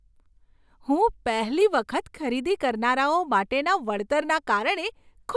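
Speech recording with no audible technical faults.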